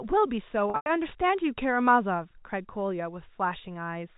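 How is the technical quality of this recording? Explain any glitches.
One glitch stands out, heard through a telephone-band channel that carries nothing above 4 kHz. From 0.70 to 0.86 s there is packet loss with pitch repetition. About 140 ms of audio went missing, spread over 160 ms, with the longest run lasting 100 ms. The receiver filled the gaps by looping the last pitch period, which sounds like a briefly held, buzzy tone. In the longest gap that tone fades into silence, and the speech then returns through a short cross-fade. A plain dropout would go abruptly silent, and a buffer stutter would repeat a whole audible chunk.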